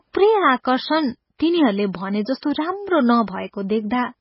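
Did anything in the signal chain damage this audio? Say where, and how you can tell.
Yes. The speech sounds watery and swirly throughout, with nothing above 5.6 kHz. This is the codec stage, likely heavy MP3 compression at around 16 kbps. The bit-starved encoder chops off the treble and lets weak frequency lines flicker frame to frame.

From 2.38 to 2.43 s, a short hiss of about 49 ms runs just ahead of an attack, which sounds blunted. That is pre-echo from the same codec. Quantisation noise meant for the loud onset spreads across its whole block, filling the quiet gap before it.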